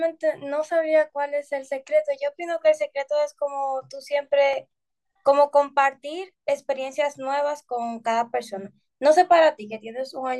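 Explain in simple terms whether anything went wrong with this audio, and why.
Something went wrong at about 4.53 seconds. The likely cause is a dropped buffer (overrun): the recording program fell briefly behind, and the sound hardware overwrote a small batch of audio before the program could save it. That sliver, only a few milliseconds, is simply missing, and the speech on either side is stitched straight together. You hear it as a short jump where the sound skips slightly ahead, with no gap of silence.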